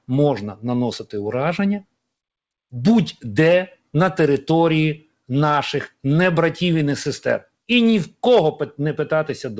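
A speech recording carried over a call path whose band stops at 8 kHz, in keeping with a G.722 wideband codec, with clock drift between sender and receiver running through the whole clip. The sender's clock runs slow by roughly one and a half percent, so the receiver's jitter buffer keeps draining rather than holding steady. This is not packet loss. The mismatch is continuous rather than a single network event.

The result is repeated timing corrections from 0.60 s to 9.16 s. To keep the buffer from running empty, the receiver repeatedly stretches or duplicates short pieces, all in the same lengthening direction, adding around a tenth of a second in total and leaving the playback at about 99% speed. Unlike a steady resampling error, which would shift pitch and tempo smoothly, these edits are small, unevenly spaced hiccups in the rhythm with the pitch left unchanged.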